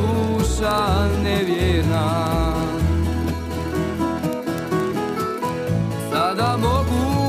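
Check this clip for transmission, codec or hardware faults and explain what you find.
Word clock ticks run from 0.13 s to 7.26 s. Sharp ticks of uneven strength repeat about every 40 ms. The receiving device runs on its own clock, roughly 700 ppm off the sender's. At each slip a single sample is dropped or repeated.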